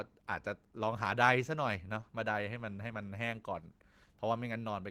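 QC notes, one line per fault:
Nothing to flag here, the speech comes across without any faults worth noting.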